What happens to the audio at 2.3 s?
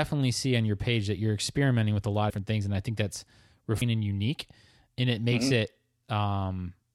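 At 2.29 s, compressed frames are skipped: about seven frames, each about 26 ms, are not played, so around 150 ms of speech vanishes between "experimenting with a lot" and "things and I think", and the audio jumps ahead at the join.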